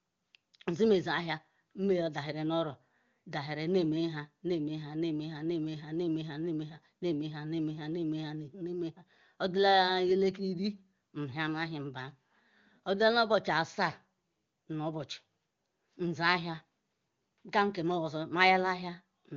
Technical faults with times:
none

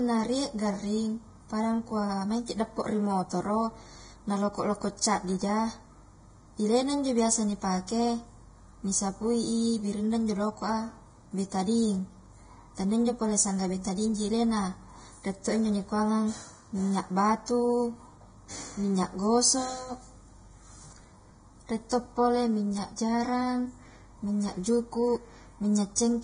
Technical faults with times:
0.00-26.23 channel delay (comb filtering)
0.00-26.23 low-bitrate audio saved at a high bitrate

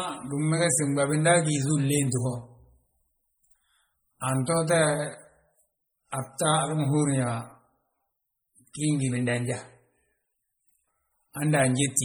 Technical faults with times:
0.00-12.04 MP3 compression

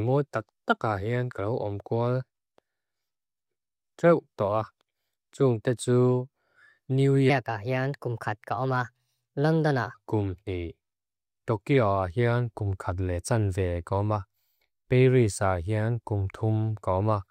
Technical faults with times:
7.30-9.95 section at the wrong speed

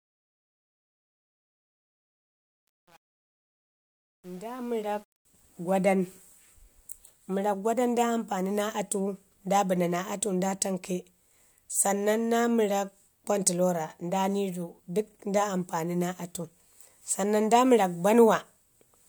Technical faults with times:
0.00-5.25 truncation distortion on a fade

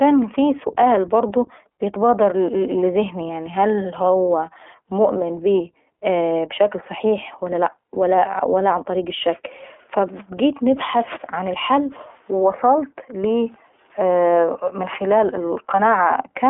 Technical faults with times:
0.00-16.49 iLBC codec

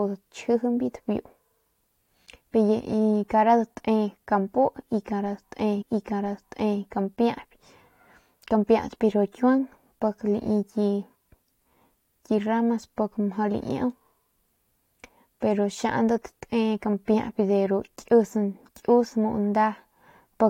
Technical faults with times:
5.81-6.81 stream segment repeated

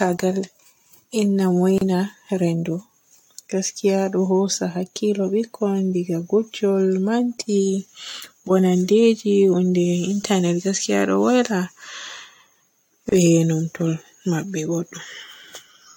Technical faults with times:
1.78-1.81 gap at a join of encoded pieces
13.09-13.12 gap at a join of encoded pieces

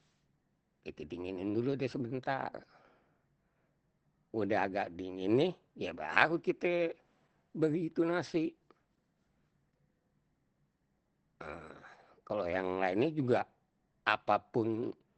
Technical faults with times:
0.00-15.17 Opus compression

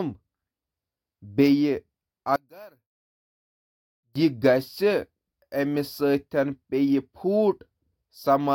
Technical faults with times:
2.36-4.15 one channel inverted

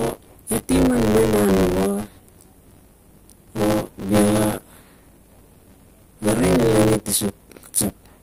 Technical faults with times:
0.00-8.22 buffer tearing

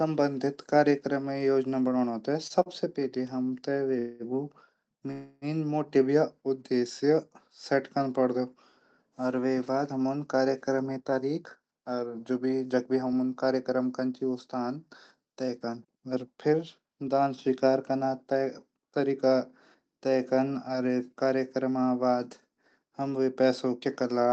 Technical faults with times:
2.47-2.69 short stall from a late packet
3.99-4.23 call audio freeze
5.11-5.45 call audio freeze
10.82-20.85 jitter buffer speed-up

